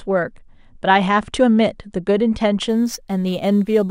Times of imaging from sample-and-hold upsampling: 2.69-3.90

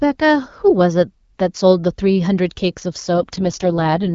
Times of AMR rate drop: 3.14-4.14

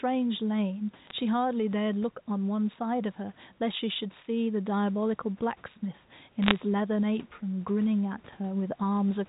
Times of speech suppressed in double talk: none

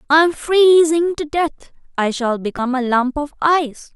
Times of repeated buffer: 0.79, 2.58

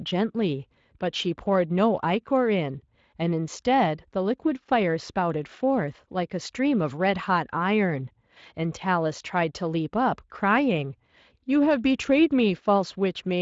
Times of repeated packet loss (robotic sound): none

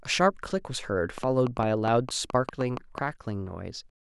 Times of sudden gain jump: none

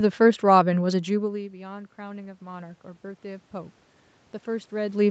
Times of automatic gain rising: 0.87-3.81

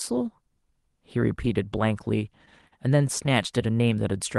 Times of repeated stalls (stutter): 2.45-3.29

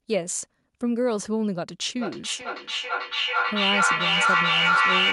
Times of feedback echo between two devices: 1.98-5.12

